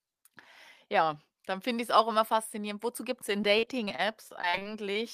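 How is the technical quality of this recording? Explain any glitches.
The recording has one clear glitch, near the end. From 3.41 to 4.97 s, just after "gibt es in", there is repeated packet loss (robotic sound). Short holes, the longest around 40 ms, keep recurring. Each is patched by stretching the previous sound. About a fifth of this stretch is filled that way. The speech turns choppy, with pieces missing.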